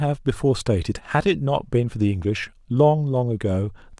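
Listening closely to the speech, nothing stood out as a technical problem at any point.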